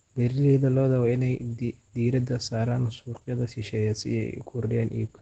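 Opus voice compression runs through the whole clip, and the damage is plainly audible. Nothing reaches above about 8.9 kHz, near the 8 kHz wideband ceiling of the SILK linear-prediction coder, so the speech loses its top-end air and sounds muffled. The excitation is coded coarsely, giving a hoarse, slightly robotic grain to voiced sounds. That combination points to a low bitrate of around 12 kbps, with the codec working in 20 ms frames.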